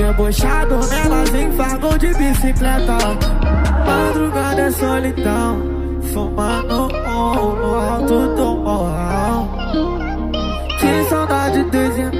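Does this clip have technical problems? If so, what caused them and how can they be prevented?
No, there are no technical problems to report in this clip. Nothing needs fixing or preventing.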